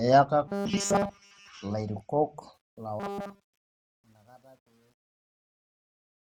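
Speech clip with robotic sound from repeated short buffers at 0.48 to 1.48 s and again at 3.00 to 3.43 s, a rigid 200 Hz buzz that likely comes from 5 ms chunks being looped, most of the audio in the first stretch and all of it in the second. A spectrogram shows evenly spaced 200 Hz harmonic lines. Truncation distortion on the fade runs from 2.54 s to the end as the fade-out loses resolution at about 10 bits without dither. From about 3.35 s it turns gritty, and the waveform shows visible square steps.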